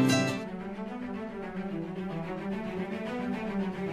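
No technical faults are audible.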